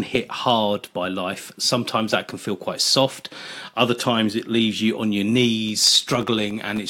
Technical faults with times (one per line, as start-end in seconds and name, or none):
5.69-6.79 processor overload crackle